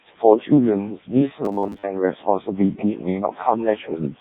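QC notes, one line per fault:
Throughout: Codec 2 vocoder, heavily damaged speech resynthesised from sine waves, robotic and buzzy, which fits its lowest 0.7 kbit/s mode.
1.45–1.83 s: robotic sound from repeated short buffers, a rigid 100 Hz metallic buzz over most of this stretch, likely from 10 ms fragments being repeated while new audio is skipped.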